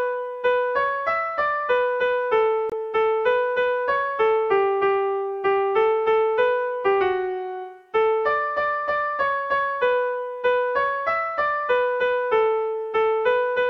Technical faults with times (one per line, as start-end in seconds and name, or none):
2.70-2.73 corrupt frame muted